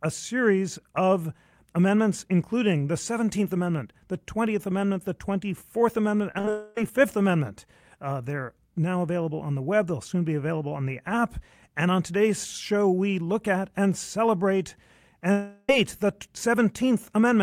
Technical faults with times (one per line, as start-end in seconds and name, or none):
6.31-6.51 repeated packet loss (robotic sound)
6.51-6.78 long network dropout
15.32-15.69 long network dropout